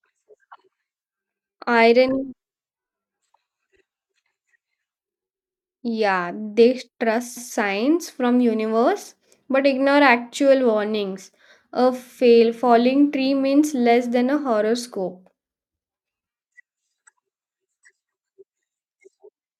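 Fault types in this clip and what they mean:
Repeated frames: a run of compressed frames was sent or written twice, so the decoder plays the same stretch of speech again. A 48 ms block repeats at 3.76 s and a 144 ms block at 7.36 s. Each is heard as a brief stutter and adds its length to the audio.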